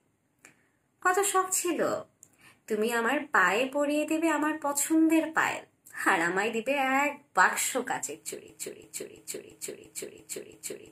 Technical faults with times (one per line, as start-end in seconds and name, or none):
8.49-10.92 broken-record loop